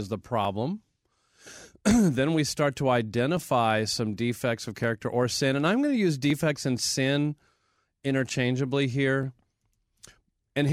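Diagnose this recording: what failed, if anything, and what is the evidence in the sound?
A buffer between two independently clocked devices is the failing stage, most likely from clock drift buffer slips. Their clocks disagree by something like 500 ppm, so the buffer creeps toward empty or full until a small block of a few tens of samples is dropped or repeated. In this speech, that produces a short click roughly every 1.46 s, about seven times between 0.45 s and 10.69 s, each a tiny discontinuity in the waveform.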